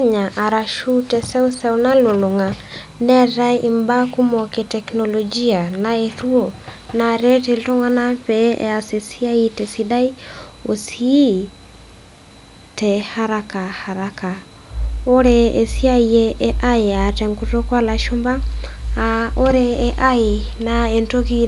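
Speech, with a steady ticking from 0.0 to 8.1 s. The ticks come ten times a second, at 10 Hz, and sit under the sound only where there is signal. This is the resampler restarted on every block. Each 100 ms block was converted on its own. The converter never saw the samples just past each edge, so every boundary carries a small error. The pattern points to an upsampling from 24 kHz to 48 kHz.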